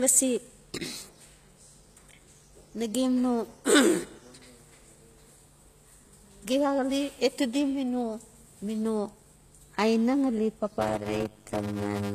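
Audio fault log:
throughout: Low-bitrate audio saved at a high bitrate. The speech has nothing above 14.9 kHz, a hard ceiling that a high-bitrate MP3 would not impose by itself. The likely cause is an earlier low-bitrate encoding, which fits a pass near 24 kbit/s. That first pass removed detail and left its artefacts. Re-encoding at a high bitrate keeps that damage intact and adds almost nothing new. The file is large, but what was lost does not come back.
10.79 to 12.15 s: Block size mismatch (padded). From here to the end, a steady buzz at 100 Hz sits on the speech. One stage writes short blocks and the next reads longer ones. The gap in each block is filled with silence, so a short dropout recurs 100 times a second. This fits 256-sample blocks padded out to about 480. The speech runs at 0.533 times normal speed, at roughly its normal pitch.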